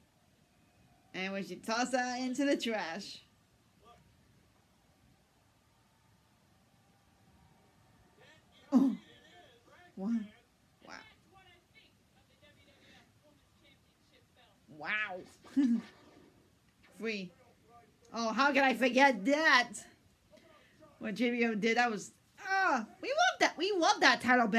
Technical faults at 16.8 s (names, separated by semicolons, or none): none